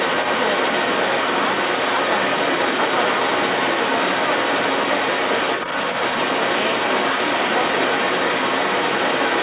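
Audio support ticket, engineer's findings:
Second voice audible alongside the talker for the full clip, 0 to 9.4 s, somewhat louder than the main speech, band-limited to 4 kHz like the rest. Other side's voice leaking through: likely incomplete echo cancellation leaving far-end loudspeaker pickup in the mic.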